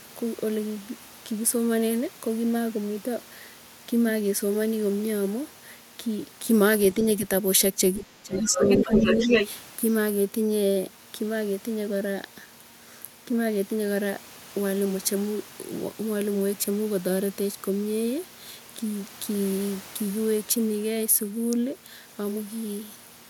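The echo canceller likely failed to separate the talker from the loudspeaker echo when both sides spoke at once, and turned everything down. That is speech suppressed in double talk, from 7.97 to 9.28 s. The talker's voice dips, at its deepest by something like 15 dB, for roughly a second in all within that span, so parts of the speech sink and break up against the overlap.

Starting at 8.36 s and running to 9.49 s, the other side's voice is leaking through. The far end is playing on the talker's loudspeaker, and the echo canceller, likely overwhelmed by the same double talk, leaves that playback in the microphone signal. The second voice is roughly as loud as the talker. It sits right on top of the suppressed speech and continues briefly after the dip ends.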